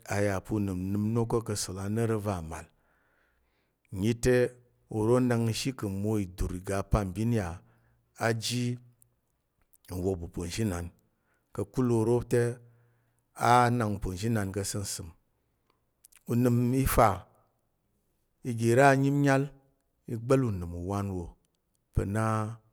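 No technical faults are audible.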